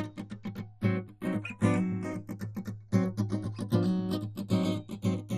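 From the start of the music to its end, the two channels are drifting apart. They behave as if clocked by separate devices roughly 50 ppm apart, so the inter-channel delay creeps up to around 0.3 ms. In mono the comb notches sweep slowly, giving a slow flanging.

Also present for the full length is a dull, gurgling, granular distortion, with nothing above 15 kHz and upper bands that seem to flicker in and out. The likely cause is MP2 compression at a low bitrate, consistent with about 64 kbps, starving the higher sub-bands of bits.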